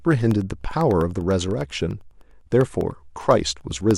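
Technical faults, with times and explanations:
0.11–3.91 s: periodic USB or driver dropouts. A regular bus or driver stall silences about half a millisecond every 0.1 s, roughly forty times, producing steady ticks through the speech.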